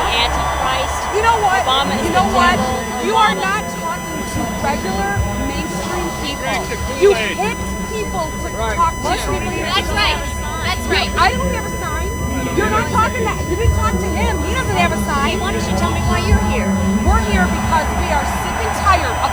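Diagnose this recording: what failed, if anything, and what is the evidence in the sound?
A steady whine of fixed pitch sits under the whole recording, centred at 1 kHz and strong, roughly 10 dB below the programme, so it is plainly audible rather than buried. This is USB whine, a fault in the analogue wiring stage: the bus draws current in 1 ms frames, and that 1 kHz pulsing leaks into the audio path through shared power or ground between the USB connection and the analogue circuitry.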